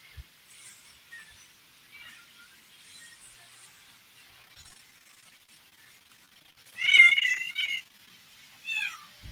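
Speech clip with repeated packet loss (robotic sound) from 4.42 to 8.10 s: dozens of short holes, none longer than 24 ms, each patched by stretching the preceding sound, so about 22% of the stretch is filled in. That rapid, continual patching gives a choppy texture, unlike a single dropout's one clean silence.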